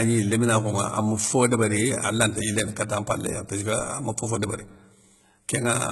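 Speech, and it sounds like HE-AAC compression at a very low rate from start to finish. The treble is heavily damaged: it stays bright but doesn't sit right, so s sounds come out gritty and lispy, with a metallic edge, and nothing at all survives above about 11.8 kHz. That's likely spectral band replication at work, with the top end rebuilt from copied lower bands rather than coded, at a rate that fits something around 16 kbps.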